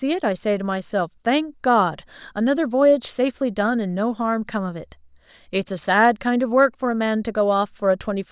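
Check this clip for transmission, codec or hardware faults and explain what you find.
Nothing here points to a transmission, codec or hardware problem, so there's nothing to flag in this speech.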